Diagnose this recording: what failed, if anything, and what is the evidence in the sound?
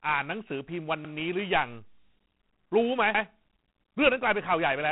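The codec stage is at fault: G.726 ADPCM runs through the whole clip, and the coarseness points to the 24 kbit/s mode, where each sample carries only 3 bits of prediction error. A rasping hiss rides on the speech and swells and fades with its level, because the quantiser step scales with the signal. On a spectrogram, nothing appears above 3.9 kHz, and a grainy noise floor fills the gaps between harmonics during speech and drops away in pauses.

The buffer stage is also at fault, with overlapping chunks. At 1.05 to 1.15 s and again at 3.15 to 3.25 s, about 100 ms of speech plays twice, heard as a stutter at each join. The joins are 2.1 s apart, which fits chunks of 2 s, each starting 100 ms before the previous one ended. On the waveform, the same shape repeats at the join, and the spectrogram shows a duplicated stretch with a vertical discontinuity line.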